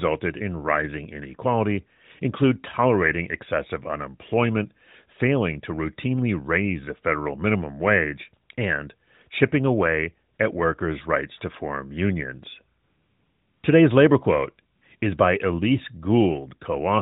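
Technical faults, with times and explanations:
10.34–10.38 s, 12.84–13.64 s, 14.76–14.82 s and 14.98–15.02 s: AMR comfort noise. The phone's voice activity detection judged the talker silent and stopped sending speech frames, so the receiver filled those gaps with synthetic noise built from a coarse description of the background's level and spectrum. The real background drops out and a smooth, steady hiss takes its place, including across the 800 ms gap. The three short gaps of 40 to 60 ms are brief switches in and out, heard within the narrowband, 4 kHz-limited AMR sound.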